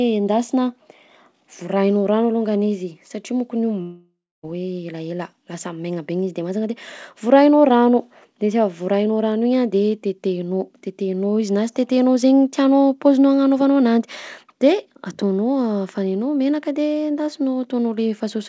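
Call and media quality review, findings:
Long network dropout, likely, 3.82 to 4.45 s: sound smears into a fading buzz, then about 0.27 s of dead air; resumes with roughly 0.62 s gone. Receiver concealment stretching the last frame over lost packets. Band stops at 8 kHz, fits G.722 at 64 kbps.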